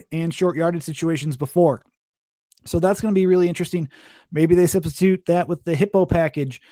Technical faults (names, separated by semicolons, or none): none